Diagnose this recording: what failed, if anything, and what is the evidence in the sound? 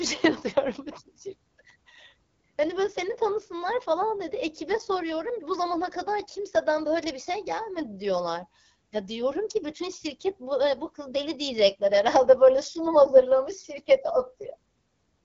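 The speech has passed through an AMR wideband (HD Voice) codec at a low rate, most likely the 8.85 kbit/s mode, a codec-stage fault that persists throughout. The pulse-driven vocal tract model leaves it plainly rough and raspy, with nothing above about 7.4 kHz.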